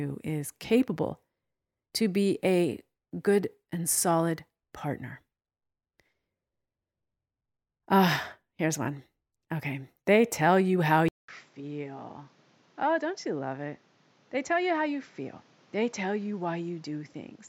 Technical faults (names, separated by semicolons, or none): input switched to a poorer device